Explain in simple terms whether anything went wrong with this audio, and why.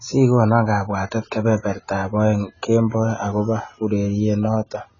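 From start to finish the speech sounds dull and muffled, as if heard through a cloth, with a heavy warbly, fizzy edge on hissing sounds like s and sh. Nothing is heard above about 7 kHz. This is AAC compression damage, and the likely cause is the recording being squeezed hard into AAC-LC to save space. The encoder kept only the parts it judged most audible, discarding the top end and roughly patching the detail that remained.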